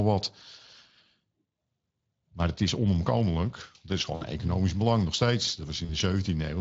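Speex codec damage runs through the whole of this speech recording and is plainly audible: the voice sounds noisy and hoarse because the CELP coder, working at a rate that sounds like roughly 20 kbps, has too few bits to model the excitation cleanly. VoIP packet loss concealed by the speech codec occurs at 4.15–4.25 s, just before "economisch belang nog steeds", and at 5.85–5.97 s, right after those same words. The decoder fills about 60 ms and then 40 ms by stretching its last pitch and filter with falling gain, which fits three and then two lost 20 ms frames. That produces a fading smear, and the voice stays weak a little beyond each gap.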